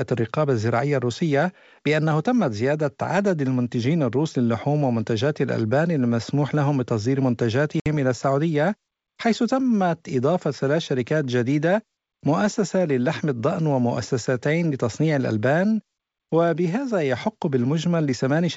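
Speech clip, carried over G.722 wideband telephone coding at 64 kbit/s with little or no audible codec damage, has one fault: packet loss on an ADPCM call from 7.80 to 7.87 s. About 60 ms of audio, roughly three packets, drops to a hard-edged silent gap. A plain dropout would resume cleanly. Here the decoder's adaptive predictor and step size have lost track of the sender's, so the speech comes back distorted until the decoder falls back into step.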